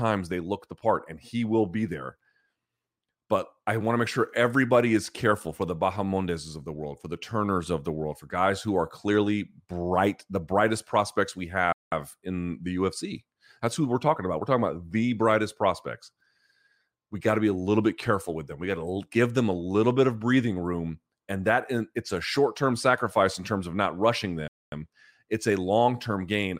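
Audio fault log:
11.73 to 11.92 s and 24.48 to 24.72 s, playback stall: speech drops to silence for 0.19 s after "the brightest prospects we", resuming at "in the", and for 0.24 s after "terms of not rushing". The player likely ran short of data, silencing output until it recovered.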